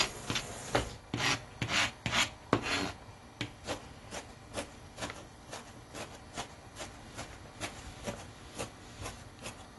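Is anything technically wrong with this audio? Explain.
Yes. The whole clip shows damage from lossy coding. Nothing is present above about 11.5 kHz, so the top end sounds dull and closed in. The damage is plainly audible, with smeared detail and a warbling, fizzy texture on sustained and noisy parts. The likely cause is AAC compression at a low rate, which fits AAC-LC near 32 kbps. At that rate the encoder drops the highest band and coarsely quantises the rest, leaving spectral gaps.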